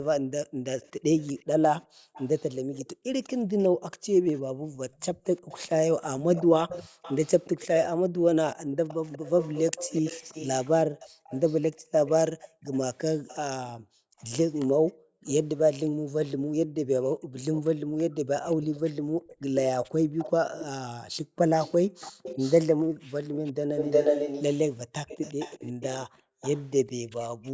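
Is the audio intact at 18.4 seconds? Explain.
No. At 18.4 s two faults overlap. Background gated by the echo canceller runs from 11.09 to 23.35 s: whenever the far-end loudspeaker plays, the canceller clamps the microphone hard, so the room tone sinks by as much as about 40 dB and returns once it releases, adding up to about four seconds of dips. Unlike a network dropout, the speech stays continuous while only the ambience around it vanishes and reappears.

An echo leak also runs from 17.54 to 27.5 s. A second copy of the speech trails the original by 361 ms and is nearly as loud as it. The likely cause is a far side playing the call over a loudspeaker whose canceller let part of its microphone pickup through and sent it back. Unlike room reverberation, this is a distinct, delayed repeat rather than a smooth decaying tail.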